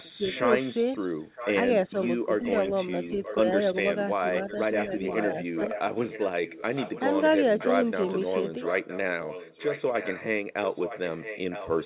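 Speech, carried over a call path with nothing above 4 kHz on the spectrogram, which fits G.711 mu-law at 64 kbps, and marked by three echo-control faults. Throughout the clip a second, delayed copy of the speech trails the main talker by about 0.96 s, sitting roughly 10 dB below it. This is an echo leak, most likely from a loudspeaker on the far end whose echo canceller let part of the played-back speech reach its microphone and return. On a spectrogram it shows as a fainter repeat of the harmonic and formant patterns, shifted right by just under a second, and the waveform shows smaller bursts filling what would be pauses. Between 0.18 and 5.69 s the speech dips in level in short pieces, adding up to well under a second, at most around 15 dB down. This is speech suppressed in double talk: the canceller was likely unable to tell this talker from the loudspeaker echo and turned both down. 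In the waveform the envelope is notched, and on the spectrogram the energy thins in those spots. From 1.2 to 1.35 s the room sound drops by about 14 dB and then returns. This is background gated by the echo canceller, which clamped the microphone while the loudspeaker played. It appears as a brief dark gap across the noise floor and a lower stretch in the waveform.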